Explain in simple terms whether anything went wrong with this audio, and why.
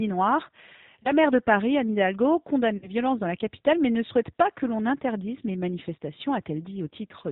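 Yes, two things went wrong. The whole clip has passed through the G.729 codec, a low-rate phone codec. Everything above about 4 kHz is gone, and the speech sounds rough and slightly synthetic. A simple muffled or band-limited recording would sound dull but smooth, without this artificial grain.

There is also VoIP packet loss concealed by the speech codec, at 1.03 to 1.12 s just before "maire de", and at 2.77 to 2.91 s just before "dans la capitale mais". Instead of going silent, as in a plain dropout, the voice smears into a brief buzzy tone or coloured noise that fades. The decoder is guessing the missing pieces, and the voice sounds weak or distorted for a moment after each one.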